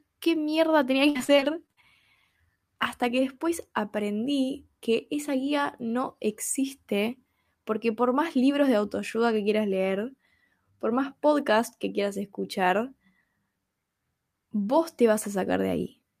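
From 1.09 to 1.84 s, packets kept arriving late or not at all, and each hole, the longest about 55 ms, was filled by extending the preceding sound. This repeated packet loss leaves about a third of that stretch concealed, giving choppy, robotic speech.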